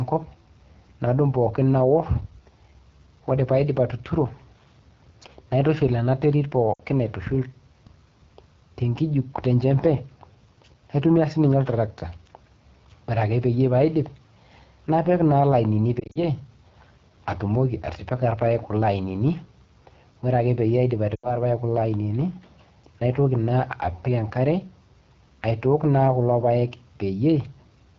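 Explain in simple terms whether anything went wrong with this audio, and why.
The whole clip went through the AMR wideband (HD Voice) codec at one of its lowest settings. The phone-style coder had too little data to work with, so the speech sounds rough and raspy throughout. The damage is easy to hear.

There are also lost AMR speech frames, where short pieces of the signal were damaged by radio errors and had to be thrown away. The decoder guessed by repeating the last sound it had and fading it out. This causes short breaks, after which the voice comes back weak or rough for a moment, at 6.74 to 6.81 s, at 15.99 to 16.23 s just after "napik naa ilainini", where several short gaps are spread out, and at 21.16 to 21.38 s just after "peyie aidip".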